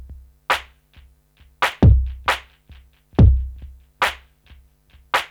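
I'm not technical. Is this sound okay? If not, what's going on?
No. There are two brief glitches, both a repeated buffer: the playback device didn't receive fresh audio in time, so it replayed the last slice it already had. At 1.72 s a tiny 5 ms slice plays one extra time, and at 4.06 s it plays two extra times. Because each slice is so short, the repeats sound like a small click or a brief buzz rather than a stutter, and nothing is skipped.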